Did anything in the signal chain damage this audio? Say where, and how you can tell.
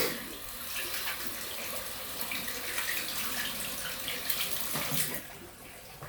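No, nothing in the chain damaged this sound.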